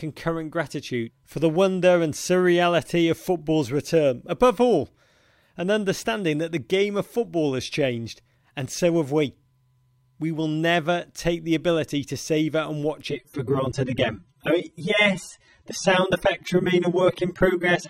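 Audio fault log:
13.11–17.90 s, adaptive stream at a lower bitrate: the audio switches abruptly, with no gap, to a coarser encoding that runs to the end, fitting a drop from roughly 96 to 24 kbit/s AAC after the connection slowed. Nothing is left above 18.5 kHz, and codec artefacts rise.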